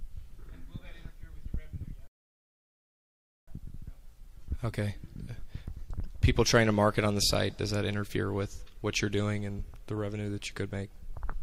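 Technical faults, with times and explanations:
2.07 to 3.48 s, rebuffering stall: the player ran dry and went silent for 1.4 s. It then resumed exactly where it stopped, so nothing was lost.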